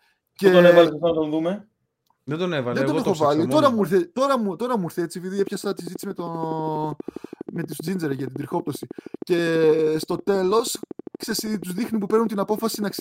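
Right after "μου ήρθε έτσι επειδή" at 5.39 s, a regular train of clicks starts, about 12.5 per second and a bit louder than the speech, running to 13.00 s, likely from nearby interference.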